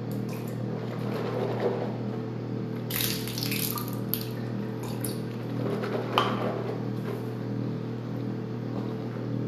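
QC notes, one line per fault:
0.09–1.88 s, train of clicks: a regular ticking of near-identical pulses at about 13.5 per second, around thirty in all, each poking a few dB above the surrounding sound and audible over it throughout that span. The likely cause is interference from nearby equipment or a faulty connection or power supply injecting repeated pulses. On a spectrogram it shows as evenly spaced thin vertical broadband lines; the waveform shows a comb of sharp, identical spikes.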